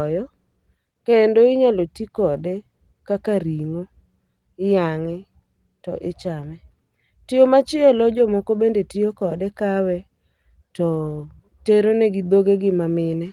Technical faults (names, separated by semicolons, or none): none